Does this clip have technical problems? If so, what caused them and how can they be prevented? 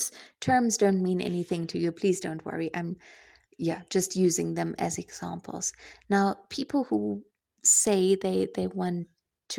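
No, nothing stood out as a technical problem on listening to this speech clip, so there is nothing here that needs a cause traced or a fix.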